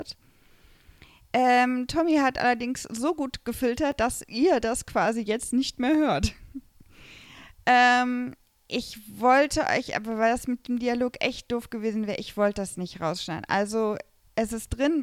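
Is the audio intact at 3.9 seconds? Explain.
No. At 3.92 s there is a repeated buffer. New audio arrived late, so the device played its last block, about 2.67 ms long, a second time. That fits a 128-sample buffer. The block is so short that the repeat sounds like a single click rather than a stutter.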